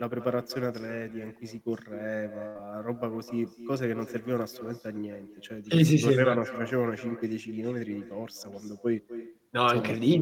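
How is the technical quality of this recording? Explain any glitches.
The quality is compromised by two faults. One runs through the whole clip and one is brief.

An echo with no canceller is present throughout. The far end's loudspeaker feeds its microphone, and nothing removes the result. Each phrase returns roughly a third of a second later, about 13 dB quieter. It sounds thinner than the original.

A burst of packet loss occurs from 2.47 to 2.57 s. The receiver stretched the last sound for 75 ms, fading it out as a held buzz or hiss. Then the speech jumps ahead, with 80 ms missing.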